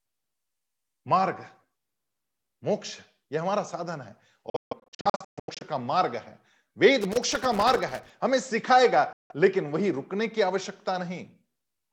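Between 4.50 and 5.63 s, wireless packets most likely failed to reach the headphones in time and were discarded, a Bluetooth dropout. The speech breaks into a cluster of silent holes: about 704 ms of audio goes missing, scattered across roughly 1.1 s, with the longest single gap about 149 ms. This points to a few dozen lost packets. Each time the sound returns, it has moved on, as though it had kept playing through the silence.

From 7.01 to 8.10 s, a loose connector crackle appears. A worn or dirty contact makes and breaks repeatedly as it shifts, chopping the signal on and off. For about a second, this produces an irregular burst of scratchy crackle layered over the speech.

At 9.13 to 9.32 s, a second Bluetooth dropout cuts out about 170 ms. It is a short gap, and the speech resumes further along rather than where it stopped.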